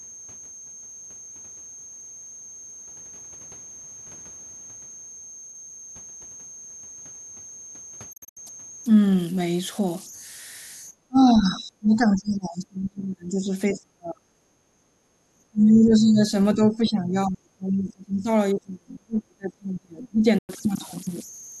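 Throughout the speech, a whistle near 7 kHz sits about 22 dB below the signal. These are converter idle tones: an undithered converter cycling through repeating bit patterns.

From 8.13 to 8.37 s, the sound breaks into short silent holes spread over about 230 ms, the longest about 73 ms. This Bluetooth dropout likely comes from late packets discarded before playback.

Speech suppressed in double talk follows. The talker sinks by roughly 25 to 35 dB at 10.92–14.33 s, 14.51–14.86 s, 15.34–16.32 s, 16.54–18.29 s and 18.53–20.25 s. The echo canceller likely mistook the talker for echo during overlap.

At 20.38 s, another Bluetooth dropout leaves a clean gap of about 100 ms, ending at 20.49 s.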